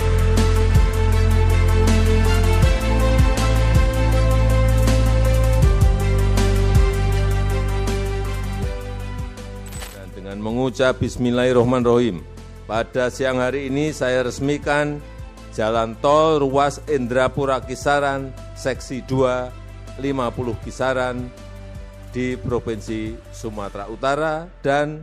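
Nothing stood out as a technical problem on listening.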